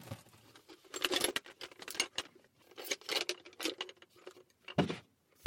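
Right from the start until about 2.22 s there's buffer tearing: the software filling the ring buffer and the hardware draining it have drifted into each other, so every period carries a small slice, a few percent, of audio from one lap earlier, around 5 ms stale, with hard joins either side. You hear it as a steady robotic buzz at 345 Hz, which fits a 128-sample buffer, riding on the sound the whole time.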